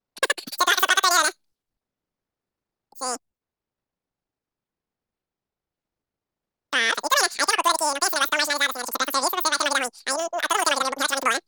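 Speech, played throughout at the wrong sample rate. It runs 2.76 times too fast and about 17.6 semitones high, which fits 16 kHz audio played at 44.1 kHz.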